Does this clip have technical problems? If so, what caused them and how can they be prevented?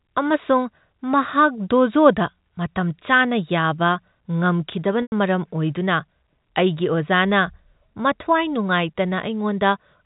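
Yes: packet loss with pitch repetition at 5.02 to 5.12 s. About 100 ms went missing, consistent with five 20 ms packets, and the receiver looped the last pitch period, giving a buzzy held sound. A spectrogram shows frozen, evenly spaced harmonics fading out; the waveform shows identical repeating cycles. Prevent it with a larger jitter buffer, forward error correction, or a less congested network path.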